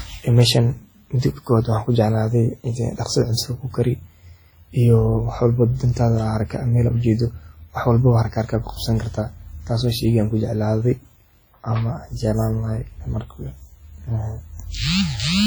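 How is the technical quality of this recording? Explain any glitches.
Technical quality is held back by heavy codec damage across the whole speech clip. Throughout, it rings and sounds washy, with hiss breathing along with the voice. That's likely WMA compression at a rate around 32 kbps, smearing quantisation noise across long transform blocks.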